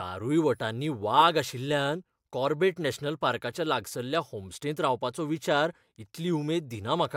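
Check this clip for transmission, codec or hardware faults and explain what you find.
The speech signal comes through steady and unbroken, with nothing audible that points to a technical fault anywhere in the recording.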